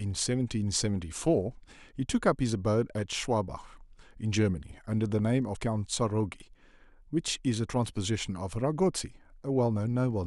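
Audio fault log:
5.55 s, compressed frames skipped: about 50 ms of speech vanishes, which points to two dropped frames of about 23 ms.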